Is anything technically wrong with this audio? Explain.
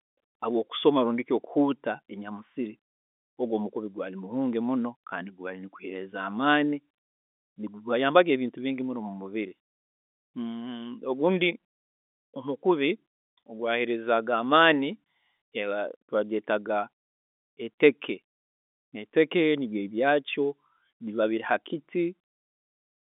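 No, nothing's wrong here: this is just ordinary speech heard over a telephone line, so the sound sits in the narrow phone band of roughly 250 Hz to 3.6 kHz with nothing above about 3.8 kHz, which is simply how G.711 telephone coding is meant to sound.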